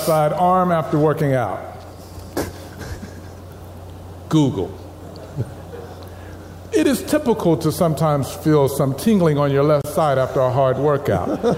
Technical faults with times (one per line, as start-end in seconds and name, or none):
9.82-9.84 gap at a join of encoded pieces